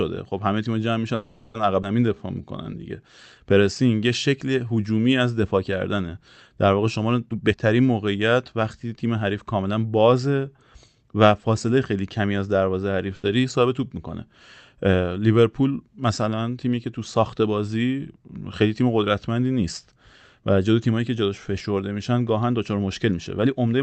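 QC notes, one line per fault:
1.15–1.56 s, call audio freeze: Packets were likely held up in transit, draining the jitter buffer. The receiver stretched the last sound into a fading buzz or hiss for about 0.39 s, then resumed where it stopped, so nothing is lost but the delay grows by 0.39 s.
1.82–1.85 s, skip ahead: With later audio already waiting, the receiver dropped roughly a tenth of a second of sound and joined the two sides almost directly, leaving only about 10 ms of fill. Playback lurches forward with a missing fragment.
2.06–2.97 s, jitter buffer slow-down: A low jitter buffer was topped up by repeating single pitch periods many times in a row, adding 113 ms. The sound runs at about 89% speed at unchanged pitch, drawn out.
7.26–7.55 s, jitter buffer speed-up: An overfull jitter buffer was trimmed by cutting short pitch-period pieces back to back, removing around a fifth of a second. 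For this brief span the sound races at about 183% speed, same pitch, clearly hurried.
13.16–13.26 s, burst of packet loss: About 80 ms of consecutive packets were lost or arrived too late. The receiver extended the last sound and faded it down for 80 ms, then resumed further on, so that 80 ms of audio is gone.
22.87–23.81 s, jitter buffer speed-up: Excess buffered audio was reduced by removing many short pitch-period pieces, roughly a tenth of a second in all. The closing stretch plays at about 110% speed at the same pitch, slightly rushed.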